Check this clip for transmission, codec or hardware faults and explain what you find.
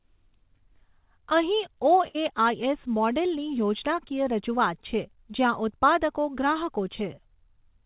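One transmission fault stands out: a burst of packet loss from 2.08 to 2.17 s, heard through a G.711 mu-law call path that carries nothing above 4 kHz. Consecutive packets never arrived in time, so the receiver continued the last sound for 63 ms while fading it, then skipped ahead with 60 ms of speech missing. Unlike a clean dropout, the gap holds a decaying buzz or hiss rather than silence.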